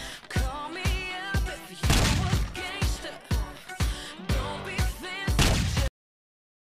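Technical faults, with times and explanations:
5.88 s, cut-off end: the sound stops mid-event and silence follows to the end, with no decay tail, because the final buffers were never written or played.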